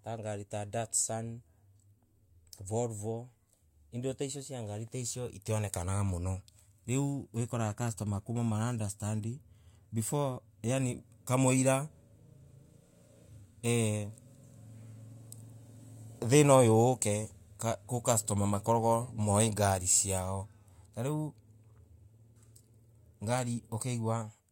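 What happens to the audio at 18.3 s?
Nothing goes wrong at 18.3 s; the speech carries on intact through that moment, with no dropout, click or distortion.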